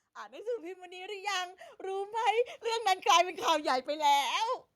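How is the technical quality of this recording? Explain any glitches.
The recording has one real glitch, an automatic gain rising problem. From about 0.29 s to 2.93 s, the level creeps up by roughly 11 dB. The gain control decided the input was too quiet and kept turning itself up over those couple of seconds. Because it's boosting the whole signal, the speech and the background noise swell together, so you hear the background climbing right along with the voice rather than just the voice getting louder.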